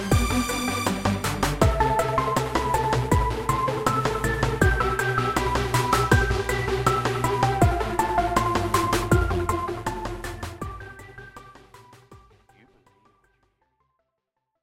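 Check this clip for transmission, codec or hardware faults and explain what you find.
No transmission, codec or hardware faults turn up in this clip; the level simply fades out smoothly over roughly the last five seconds, ending at 14.6 s.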